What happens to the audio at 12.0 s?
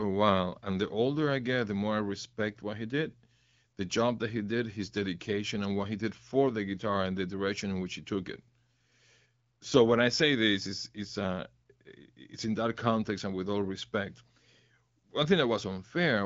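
Nothing goes wrong at 12.0 s: the speech there passes intact through the AMR wideband (HD Voice) codec, with the band ending around 7.5 kHz as that path allows.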